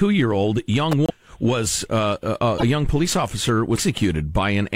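Speech, with two kinds of fault. At 0.92 s, right after "year old", a sharp snap lands on top of the voice, most likely an electrical switching spike from a nearby switch or motor arcing into the line. The voice runs straight through it, which sets it apart from a codec glitch: nothing is lost, only a click is added. The broken MP3 bit reservoir faults behave differently. From 1.06 to 1.12 s, from 2.58 to 2.63 s (between "was uh a uh" and "young police"), and from 3.75 to 3.78 s (just after "young police"), the speech skips forward and the gap briefly fills with a chirpy noise burst or a short dropout. The cause is likely missing frames. Each decoder frame that follows a cut borrows reservoir bytes that now belong to some other frame. The lengths of these disturbances fit frames of about 26 ms.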